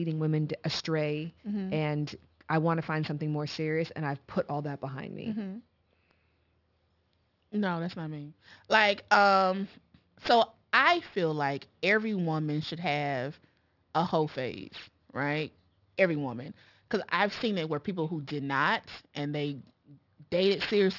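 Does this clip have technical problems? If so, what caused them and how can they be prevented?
Yes. Aliasing runs throughout the speech: sibilant energy above 6 kHz folds back below it as gritty, metallic tones roughly 20 dB down, which fits a drop to a 12 kHz sample rate. Plain band-limiting would only dull the sibilants. To prevent it, apply a steep anti-aliasing low-pass below 6 kHz before downsampling.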